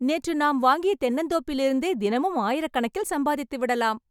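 Listening to this speech recording, nothing stood out as a technical problem at any point.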